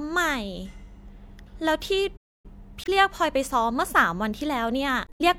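At 2.16 s the player likely ran dry of buffered data or had its output thread held up, and the result is a playback stall. The speech halts mid-flow and the output goes completely silent for about 0.27 s. The sound comes back at 2.46 s once the player recovers, leaving a clear hole in the flow.

From 2.82 to 2.89 s, damaged data in the compressed stream throws the decoder off. Bytes in that stretch are wrong, so the frames there cannot be read properly, and the decoder loses its place and hunts for the next valid frame header. For that short span the speech is disrupted. The same fault returns from 5.04 to 5.21 s, near the end. That span is longer, so the disruption lasts longer before normal decoding resumes.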